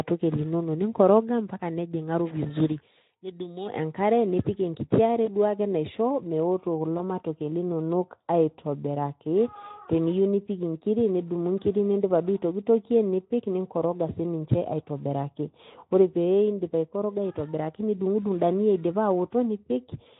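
From 2.04 to 3.95 s a loudspeaker feedback squeal appears: the microphone is picking up the loudspeaker it drives, and at 4.1 kHz the loop gain climbs past unity, so that frequency reinforces itself on every pass. It swells over roughly a second into a thin, piercing whistle that sits a few dB above the speech. The tone ends at 3.95 s.

Two brief dropouts follow, at 5.25 to 5.29 s and 6.97 to 7.00 s. Both are VoIP packet loss concealed by the speech codec. Each gap fits a single missing 20 ms frame, and the decoder fills it by extending the last pitch and spectral shape at falling gain. Each gap comes through as a short, fading smear of buzzy tone or coloured noise. The speech stays weak or distorted for a few tens of milliseconds afterward while the decoder's state recovers. The codec's light hoarseness is consistent with Speex at around 15 kbps.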